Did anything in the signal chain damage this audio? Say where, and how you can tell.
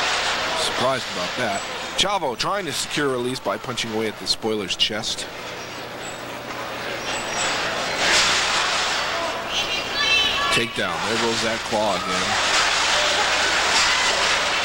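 No, nothing in the chain audibly damaged this audio, and the signal holds steady throughout without any break, distortion or level disturbance that would point to a faulty stage.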